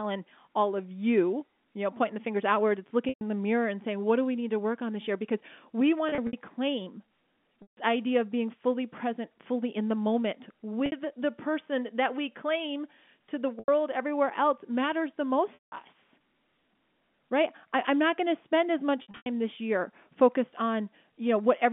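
Packet loss with pitch repetition breaks the speech at 3.09, 6.09, 7.62, 10.86, 13.59, 15.54 and 19.02 s, gaps of 60 to 180 ms. The decoder loops the last pitch period, giving a brief buzzy hold that fades before speech resumes, as with "the mirror and saying", over the narrow telephone band.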